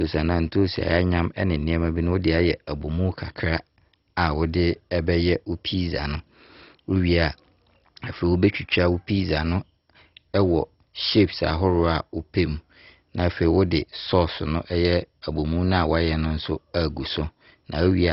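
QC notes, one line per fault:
Throughout, MP2 compression: likely a heavily starved MPEG Layer II encode, around 32 kbps, left too few bits per sub-band, so upper bands are shut off above 5.6 kHz and the rest coarsely quantised, giving dull speech with gurgling, granular distortion.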